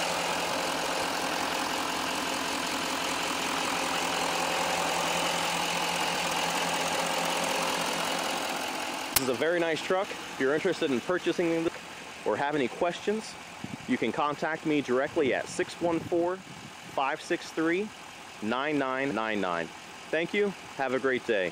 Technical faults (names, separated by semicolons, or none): chunks out of order; damaged data in a compressed stream